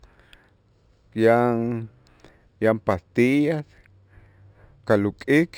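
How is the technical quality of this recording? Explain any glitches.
The recording has a technical fault that runs through the whole speech clip: imaging from linear upsampling. The audio was raised from 12 kHz to 48 kHz by joining samples with straight lines, a weak interpolation filter. The top of the original band is softened, and a mirrored copy of the spectrum sits between 6 and 12 kHz, roughly 35 dB down, giving sibilants a faint metallic shimmer. Unlike aliasing, this residue mirrors the real band upward rather than folding downward into it.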